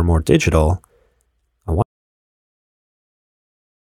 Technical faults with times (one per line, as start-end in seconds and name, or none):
1.82-3.99 audio dropout to silence